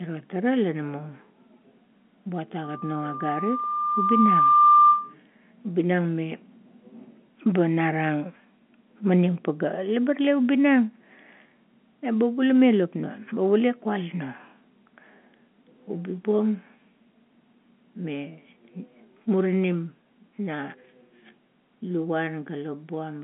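From 2.63 to 5.14 s, a loudspeaker feedback squeal at 1.2 kHz swells over roughly two seconds to sit above the speech, unlike a steady tone that starts at full level.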